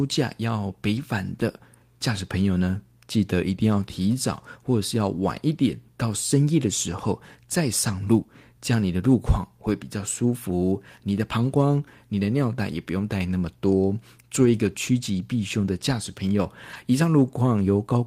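Around 0.97–0.99 s, 7.87–7.93 s, 11.15–11.17 s, 14.45–14.51 s and 16.73–16.75 s you get a lost packet rebuilt from error correction: brief 20 or 40 ms rough, noisy patches where the decoder played a low-bitrate backup copy, so there's no gap.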